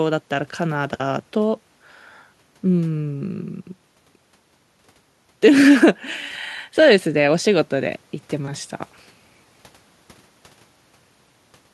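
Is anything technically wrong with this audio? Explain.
No, no technical faults here.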